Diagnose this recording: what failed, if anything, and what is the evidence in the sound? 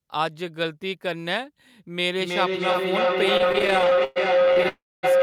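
Feedback howl, at the call-processing and acoustic stage: from 2.13 s to the end a tone near 500 Hz builds until it sits about 6 dB above the speech, pulsing roughly every 300 ms. A second device in the room is picking up its own loudspeaker output, and each trip around that loop adds gain at the frequency the room and hardware favour. Unlike an echo, the repeats grow rather than fade, and they narrow to one pitch instead of copying the talker.

Repeated stalls (stutter), in network delivery and jitter buffering: between 3.37 s and 4.66 s the audio catches 27 times, with about 406 ms of stretched or held sound in total, roughly a third of that span, and the longest hold lasting 112 ms. Packets kept arriving later than they were played, so the buffer kept running dry and the receiver held the last sound each time. Nothing is lost. Where a single freeze makes one gap, this is many short drags in a row.

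Call audio freeze, at the network and jitter buffer: from 4.68 s to 5.05 s the sound hangs for about 346 ms, the held tail fading to silence for roughly 240 ms before the audio continues from where it stopped. The likely cause is a burst of delayed packets that emptied the buffer and added about 346 ms of delay. It differs from the stutter before it because it is a single long hold that fades out rather than a series of short catches, and it differs from a dropout because no audio is missing.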